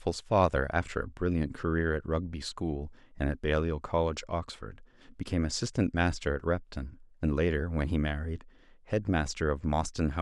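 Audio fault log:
The speech signal shows no audible technical faults at any point in the recording.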